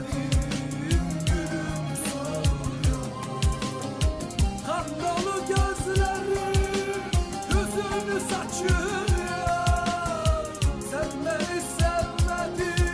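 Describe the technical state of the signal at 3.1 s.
At 3.1 s the signal is intact, with no dropout, clipping, distortion or other technical fault to be heard.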